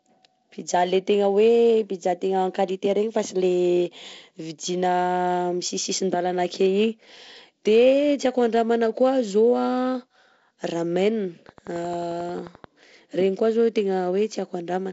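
From 11.49 to 12.65 s there's a train of clicks, roughly fifteen sharp, same-shaped ticks at a regular 11.3 per second, peaking about as loud as the speech. That's likely interference from nearby gear or a faulty connection or power supply injecting pulses.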